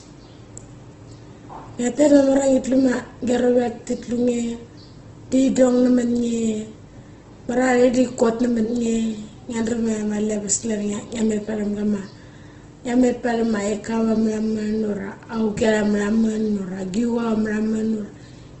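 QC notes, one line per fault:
Throughout, Opus compression: the speech sounds rough and grainy, with nothing above 8.1 kHz, likely from Opus in music mode at a low rate near 12 kbps filling starved bands with noise. A spectrogram shows a hard ceiling at 8.1 kHz and speckled harmonics.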